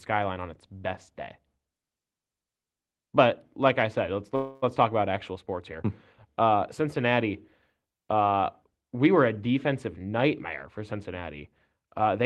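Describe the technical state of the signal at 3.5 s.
At 3.5 s the speech comes through intact, with no dropout, distortion or other fault, only the coding character of the call path it travelled through.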